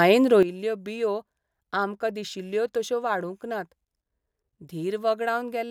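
At 0.43 s a sudden gain jump drops speech and noise floor together about 11 dB, likely an unramped gain change; the waveform steps down.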